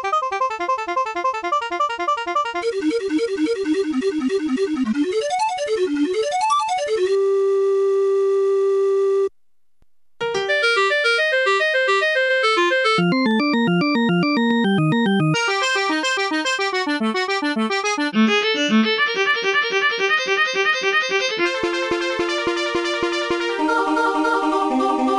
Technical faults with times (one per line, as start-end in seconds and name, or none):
13.31 dropped samples